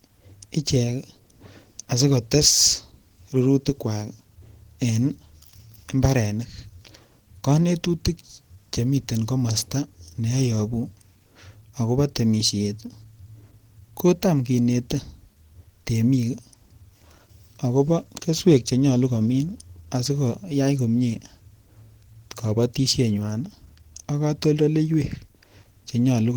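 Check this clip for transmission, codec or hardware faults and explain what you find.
One codec fault runs through the whole speech clip: Opus compression, heard throughout. The speech sounds hoarse and grainy, with rough, noisy texture where cleaner tones should be. Likely cause: Opus in its hybrid speech mode at a rate consistent with about 16 kbps, filling starved bands with noise. Bandwidth stays full, reaching about 20.4 kHz.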